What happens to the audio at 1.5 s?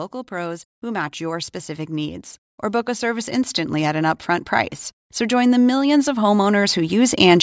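At 1.5 s the level is climbing. This is automatic gain rising, running from 0.28 to 4.57 s. The gain control judged the input too quiet and turned itself up, by about 8 dB. Speech and background swell together, steadily.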